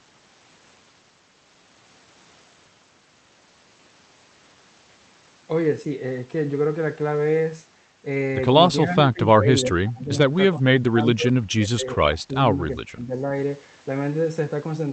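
A speech recording carried over a call link whose content stops around 8 kHz shows speech suppressed in double talk three times: 9.04 to 9.48 s with a drop of about 15 dB, then 9.69 to 10.33 s and 10.53 to 13.32 s, each dipping by about 25 dB. The likely cause is an echo canceller failing to separate this talker from the far side's overlapping echo and pulling this talker down. The waveform shows sunken, patchy stretches, and a spectrogram shows those spans fading and thinning.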